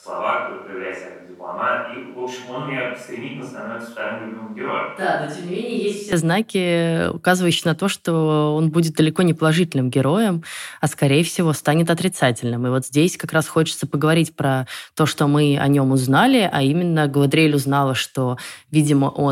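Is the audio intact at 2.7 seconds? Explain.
No. At 2.7 s the speech is in a stretch that runs from the start of the clip to 6.12 s and sounds like a switch to a distant microphone. The close microphone's signal is likely missing, leaving only a pickup further from the talker. The voice sounds roomy and hollow, with thinner bass, a level about 5 dB lower than the later close-miked speech, and room noise sitting roughly 35 dB below the speech. It returns abruptly to the close sound at 6.12 s.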